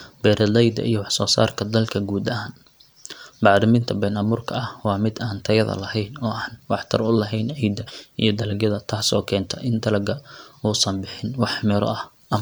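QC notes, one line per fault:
No fault found.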